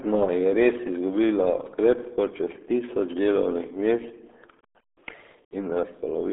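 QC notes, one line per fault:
Throughout, RealAudio 14.4 codec. The speech is muffled and gargly, with heavy codec damage. Nothing passes above 3.8 kHz, and the band sits roughly between 250 Hz and 3.4 kHz. The coarse, smeared texture fits a dial-up-era coder running near 8 kbit/s.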